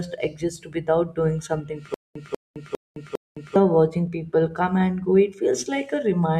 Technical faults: stutter with silent gaps

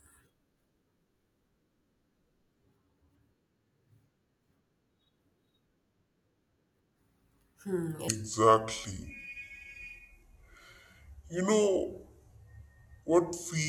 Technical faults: section at the wrong speed

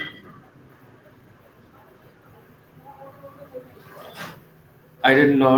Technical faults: none

